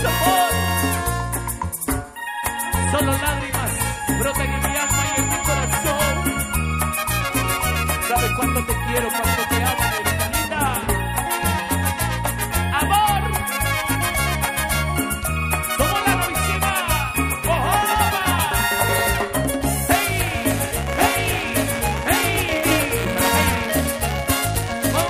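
From 19.92 s to the end, a steady robotic buzz rides on the sound, repeating at 172 Hz and present only while there is signal. This is buffer tearing: the writer and the hardware reader of the ring buffer have drifted until they cross within every period, which fits a 256-sample buffer. A small slice of each period therefore plays audio from roughly ten milliseconds earlier, bounded by hard joins that produce the rattle.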